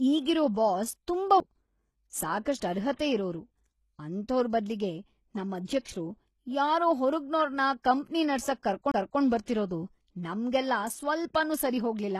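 A speech recording carrying persistent codec damage plus four short timed defects. Throughout, the upper band has a synthetic, gritty quality, with s sounds turning metallic and lispy, and nothing is present above 12.4 kHz. This points to HE-AAC compression, likely at a low bitrate around 16 kbps. Spectral band replication rebuilds the treble from copied lower bands under a coarse envelope, so the high harmonics no longer line up with the real ones below the crossover. There are two CD skips. At 1.40 s there is a very brief mute of about 5 ms. From 8.92 to 8.94 s a longer dropout of roughly 30 ms occurs. Each time, the laser has jumped onto a different turn of the spiral, and playback resumes from another point, so the sound jumps rather than continuing smoothly. Pre-echo appears at 2.96 to 2.99 s, where a 31 ms wash of hiss precedes an attack, and at 5.65 to 5.68 s, with a 27 ms spread. 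In both, the transform block containing the onset has its quantisation noise sized for the loud part and spread across the whole block. That noise fills the quiet lead-in and blurs the attack itself.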